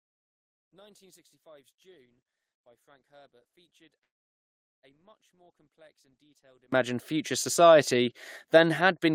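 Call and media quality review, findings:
Mono fold-down, 0.00 to 6.72 s: speech collapses to a faint residue, roughly 35 dB down, then recovers. Likely one channel inverted: one side's polarity is flipped, so the centred speech common to both channels cancels when they're summed, leaving only the small left/right difference. Worth checking the channel routing or wiring on that path.

Dropout, 4.03 to 4.85 s: about 0.8 s where the sound stops and goes almost entirely silent, after which speech picks up exactly where it left off with nothing missing. Everything after that point lands roughly 0.8 s later. Likely a call audio freeze: packets got held up in transit, the jitter buffer ran dry, and the receiver padded the wait with silence instead of dropping anything. Network path or jitter buffer sizing is the place to look.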